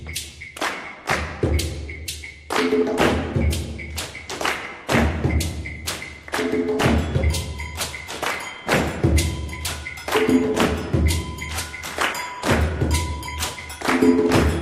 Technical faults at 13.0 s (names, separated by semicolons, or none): MP2 compression